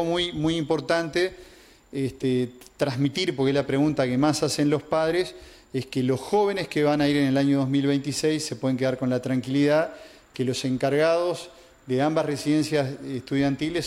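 No technical faults can be heard anywhere in the signal.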